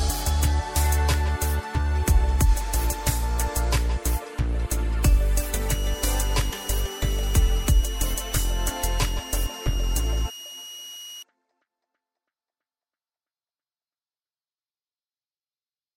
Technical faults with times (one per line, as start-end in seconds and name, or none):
5.69-11.23 switching supply whistle
9.76 compressed frames skipped